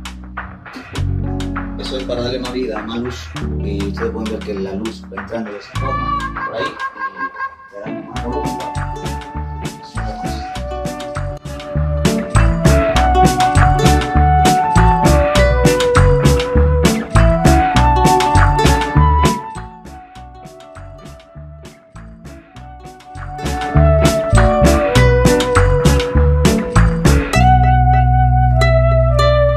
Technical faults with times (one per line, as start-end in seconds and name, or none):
19.25-19.71 zipper noise
23.06-23.76 zipper noise